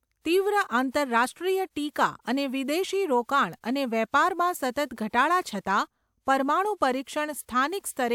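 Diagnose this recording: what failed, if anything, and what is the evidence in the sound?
Nothing failed here: I listened for trouble at every stage of the chain and none of it shows up anywhere in this speech recording.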